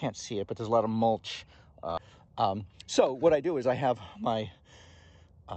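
At about 1.97 s there's a skip ahead: playback jumps straight forward with no filler, so roughly 0.7 s of audio just isn't there. What happened is that later audio was already queued when a chunk got thrown away, either lost in transit or dumped by the jitter buffer when it overflowed, and the two sides got butted together almost seamlessly. You hear an abrupt splice where the sound lurches ahead mid-flow.

Right after, from about 2.07 s to 3.89 s, the jitter buffer speed-up kicks in. Playback runs at about 114% while the pitch stays put. The buffer was holding more than its target, so the receiver kept snipping out tiny slices, a pitch period or a few at a time, shaving off something like a third of a second in total to bring the delay back down. It comes across as hurried and a bit crowded, and the passage sounds rushed compared with the audio around it. All of this sits on the Opus call path, which tops out around 8 kHz.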